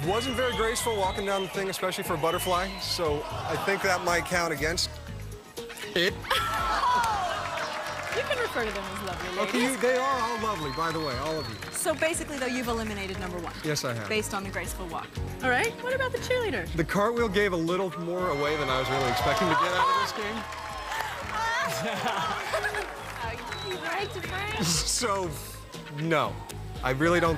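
Nothing stood out as a fault on listening.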